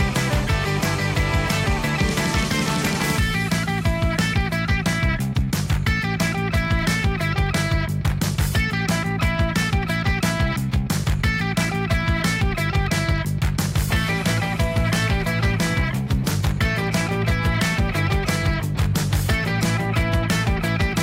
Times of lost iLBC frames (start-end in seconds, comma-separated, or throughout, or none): none